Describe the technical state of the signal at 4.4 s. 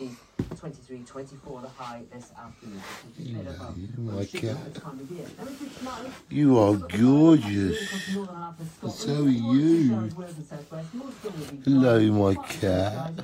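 At 4.4 s the signal is intact, with no dropout, distortion, glitch or other technical fault audible there.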